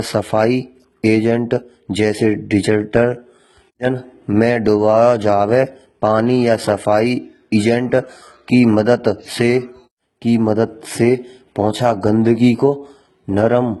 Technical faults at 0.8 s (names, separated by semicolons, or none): HE-AAC compression